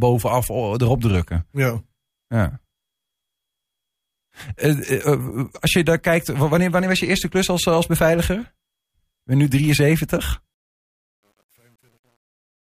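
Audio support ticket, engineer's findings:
Truncation distortion on the fade-out, 10.54 to 12.68 s. Gritty tail, worst from 11.01 s. Fade or gain stage drops bits without dither, which fits roughly 9-bit output.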